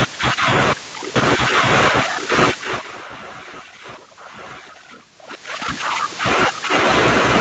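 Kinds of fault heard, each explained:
Doubled audio track: an equally loud, full-band copy trails about a second behind, likely from a second capture path; unlike echo, it has no decay and stops abruptly.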